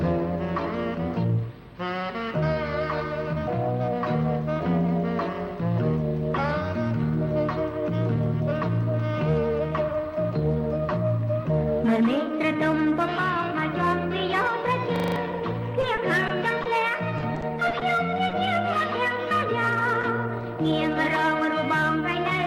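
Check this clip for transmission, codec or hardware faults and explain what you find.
Three kinds of fault appear in the last third of the clip: a hardware hang loop, two stretches of repeated packet loss, and two isolated concealed dropouts.

From 14.96 to 15.16 s there is a system hang loop. The host or driver stalled while the audio device kept replaying its ring buffer. A 40 ms slice repeats exactly five times, a 25 Hz cycle that fits a 40 ms buffer. The result is a rapid mechanical stutter with a buzzy edge. About a fifth of a second of the real audio is lost, replaced by those repeats.

Repeated packet loss (robotic sound) follows in two bursts. From 15.81 to 16.67 s there are four gaps, the longest 20 ms, with 80 ms concealed in total. From 17.17 to 17.83 s there are six gaps, the longest 30 ms, with 120 ms concealed, about 18% of that span. Each hole is patched by extending the preceding sound before the next one arrives. 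That gives a choppy, robot-like texture, worse in the second burst.

Short concealed packet loss occurs at 18.29 to 18.33 s and again at 20.01 to 20.05 s. In each case roughly 20 ms of data arrived too late for the decoder. The receiver bridged the hole by continuing the previous sound, shaped from its pitch or from noise, and then crossfaded back into the real signal. Each dropout is heard as a brief smear or wobble rather than a clean gap.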